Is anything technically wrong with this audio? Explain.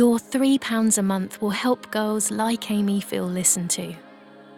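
No, nothing technically wrong can be heard in this audio, and the signal holds steady without any disturbance.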